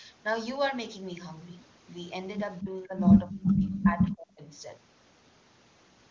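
From 2.62 to 2.98 s, the talker's level sags by about 10 dB for a short stretch. From 3.23 to 4.49 s, a much deeper dip follows, about 40 dB at its worst, and the voice nearly vanishes for roughly a second in pieces. This is likely speech suppressed in double talk. Both ends spoke together. The echo canceller mistook the talker for loudspeaker echo and turned the voice down.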